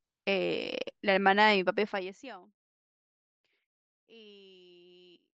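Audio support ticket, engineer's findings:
Zipper noise from 1.77 to 2.39 s. A fade of roughly 25 dB is done in 1 dB steps, about 50 a second, so it ticks audibly. The gain is stepped in coarse increments without smoothing.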